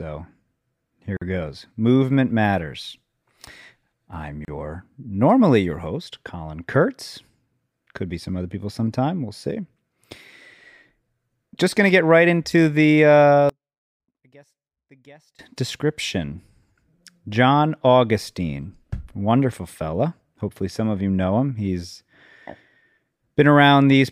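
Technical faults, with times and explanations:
1.17 s and 4.45 s, gap at a join of encoded pieces: the speech drops out for about 47 ms and then 31 ms, with smeared edges, then picks up right where it left off. Separately encoded chunks were butted together, leaving each encoder's start delay and end padding in as silence.
13.49 to 15.39 s, one channel inverted: the speech suddenly falls away by about 31 dB, leaving only a faint trace. That's what you hear summed to mono when one stereo channel's polarity is flipped, likely here, because the shared centre content cancels.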